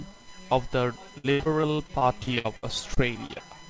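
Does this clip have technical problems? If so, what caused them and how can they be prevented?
Yes. From 1.18 s to 3.42 s the speech turns choppy and robotic, with pieces of syllables missing. The cause is repeated packet loss. Packets were dropped or arrived too late, leaving fifteen gaps, and each hole was patched by stretching the sound just before it. The longest patch runs 78 ms, and about a quarter of that stretch is concealment filler rather than real audio. The audio also stops at 8 kHz, which fits a G.722 call codec. To prevent the loss, use a stable wired connection, and enable forward error correction or a larger jitter buffer.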